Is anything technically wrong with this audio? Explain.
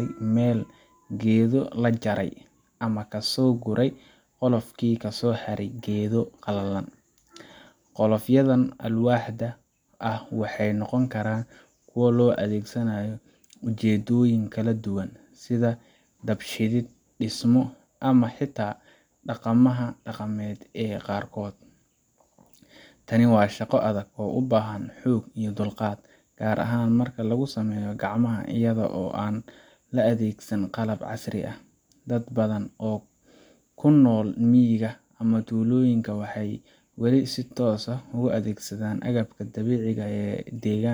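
No, nothing technically wrong can be heard in this speech recording; the signal holds steady throughout.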